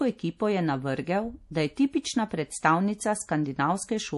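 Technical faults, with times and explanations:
Throughout, MP3 compression: the speech has a plainly audible watery, swirling texture and nothing above 11.5 kHz, which fits a low bitrate near 48 kbps. The likely cause is an encoder short of bits, cutting treble and switching weak frequency lines on and off between frames, unlike a simple low-pass filter.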